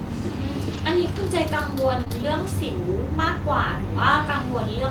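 At 0.73 to 0.79 s, a lost packet rebuilt from error correction: about 40 ms, which fits two 20 ms packets, was played from the low-bitrate copy carried in the next packet, so the speech continues without a gap but sounds rougher and noisier. From 2.01 to 2.12 s, a short concealed packet loss in three consecutive 20 ms stretches, filled by extending the preceding sound, is heard as a smeared wobble. At 2.12 to 2.14 s, one more lost packet is rebuilt from error correction, giving a brief rough patch before the clean audio resumes.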